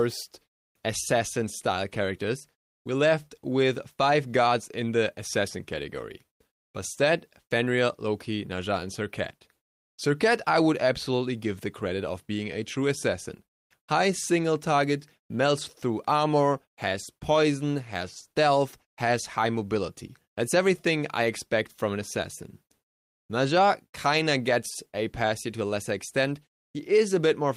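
No technical faults are audible.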